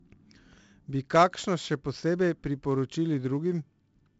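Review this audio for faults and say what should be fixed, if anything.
The speech is degraded throughout by heavy 4-bit ADPCM compression. Each sample is coded as a 4-bit step from a predicted value, with the step size adapting as the signal moves. The coding error rides on the signal level, so every loud passage carries a gritty hiss and sharp onsets distort where the step size lags. Nothing reaches above 7.7 kHz, which, together with a rate of 64 kbps, points to a 16 kHz sample rate and explains the dull top end. To prevent it, record and deliver the speech as linear PCM at 44.1 or 48 kHz, or use a modern perceptual codec at an adequate bitrate instead of ADPCM.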